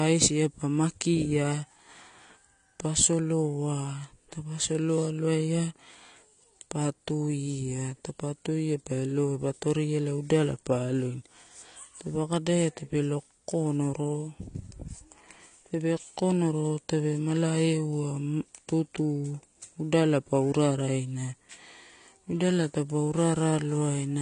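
Throughout, likely AAC compression at a low bitrate near 32 kbps: the speech is cut off above 9.7 kHz, and coarse spectral quantisation leaves it audibly dull and smeared.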